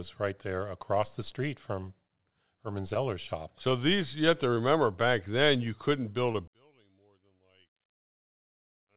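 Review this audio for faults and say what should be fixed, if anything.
Short concealed packet loss at 2.94, 3.69 (just before "these you have to"), 4.54 (just before "back then you couldn't") and 6.32 s. About 20 ms of audio each time never arrived, so the receiver continued the preceding sound and blended back, leaving brief smears or wobbles. A larger jitter buffer or forward error correction on the call link would prevent these.

One channel inverted, from 6.48 s to the end. The speech suddenly drops by about 34 dB to a faint residue, most likely because one stereo channel's polarity flipped and the shared centre content cancels in the mono sum. Checking channel polarity before any mono downmix would prevent this.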